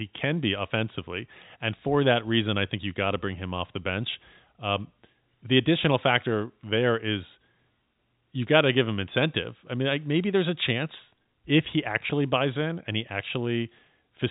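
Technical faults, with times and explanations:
No technical faults can be heard in this speech recording. It carries the narrow band of G.711 telephone coding, with nothing heard above about 3.8 kHz.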